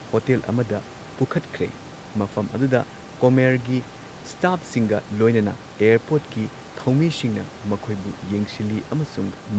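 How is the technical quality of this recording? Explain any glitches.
The technical quality of this recording is good, and there are no glitches to explain.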